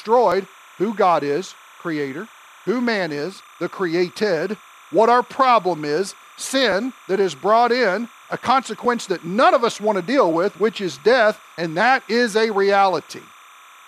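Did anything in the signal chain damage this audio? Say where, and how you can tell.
Yes, two faults entered the chain, and the clip is speech.

Timecode bleed is present from start to finish, entering at the analogue wiring stage. Behind the speech there is a steady chirping warble about 30 dB below the signal, alternating between pitches near 1 kHz and 2 kHz at a rate matching 29.97 frames per second. This is linear timecode leaking in from an adjacent track or cable. What sets it apart from hum or a converter whine is that the pitch keeps flipping between two tones rather than holding a single steady one.

Clock drift buffer slips are the likely cause of a regular click that occurs about every 2.13 s, from 0.32 s through roughly 13.1 s, around seven times in total. This points to the driver or buffer stage. Two devices running on independent clocks that differ by something like a few hundred parts per million gradually fill or drain the buffer between them, until a few dozen samples are dropped or repeated. 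The clicks arrive at strictly even intervals, which rules out the random spacing that network packet loss or a damaged file would produce.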